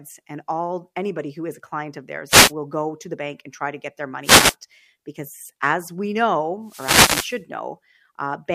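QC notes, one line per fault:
2.28–2.52 s, 4.23–4.55 s and 6.64–7.42 s, wireless microphone noise hits: after "is a client of", "try to get their" and "because as we", the radio link fades and receiver hiss swells into a swish of static, unlike steady broadband noise or digital dropouts.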